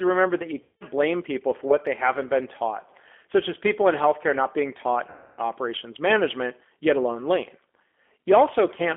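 Throughout, the G.729 codec at 8 kbit/s confines the speech to roughly 250 Hz to 3.4 kHz and adds a plainly audible rough, synthetic texture from its pulse-based reconstruction. From 0.63 to 0.84 s, between "remember that you" and "blame people for what", VoIP packet loss concealed by the speech codec smears about 180 ms of lost audio into a fading buzzy tone or coloured noise as the decoder extrapolates its last pitch and filter. The same fault recurs from 5.10 to 5.40 s, after "healthcare not being taught" and before "operations management yet alone", covering about 280 ms, with the voice staying weak or distorted for tens of milliseconds or more after recovery.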